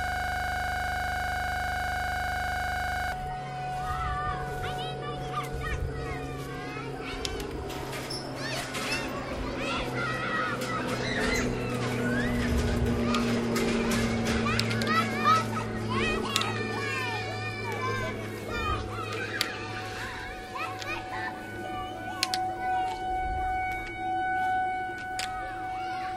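A system hang loop is already under way when the audio begins and lasts until 3.12 s. The computer or its audio driver stopped supplying new data, so the sound hardware kept replaying the same 40 ms stretch of its ring buffer, some 77 times in a row. Because the looped piece is so short, it repeats 25 times a second and fuses into a steady, mechanical buzz at that rate rather than an audible stutter.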